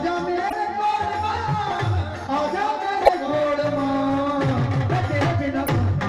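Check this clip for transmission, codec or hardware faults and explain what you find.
Three short codec glitches interrupt the audio, all of the same kind.

At 0.46–0.53 s, 3.02–3.09 s and 5.63–5.69 s, each lasting roughly 50 to 70 ms, a brief chirp or squawk breaks through. This is damaged data in a compressed stream: corrupted bytes make the decoder misread frames and lose sync until it finds the next valid frame header.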